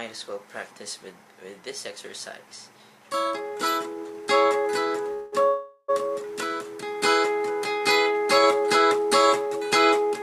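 At 5.13 s the sound stalls for about 190 ms, then again from 5.48 s to 5.90 s for about 400 ms: a call audio freeze, likely from delayed packets draining the jitter buffer. Each gap is filled by a smeared continuation of the last sound that fades away, reaching brief silence near the end of the second. A spectrogram shows horizontally stretched, blurred bands there. Playback then resumes where it stopped, with nothing lost, so everything afterwards runs about 0.6 s late.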